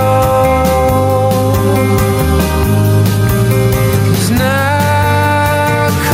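Gain pumping runs through the whole clip: the background rises in each gap and ducks by around 5 dB under every loud sound, leaving the level squashed. Unlike a noise gate, which cuts quiet background away, this swells it, likely from excessive input gain driving a fast limiter.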